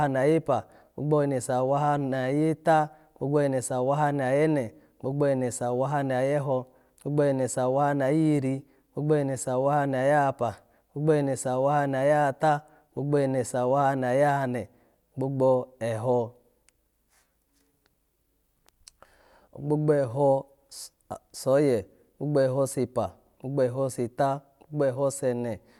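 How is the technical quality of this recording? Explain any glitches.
Nothing technical gets in the way here; the speech comes through without any glitches to point out.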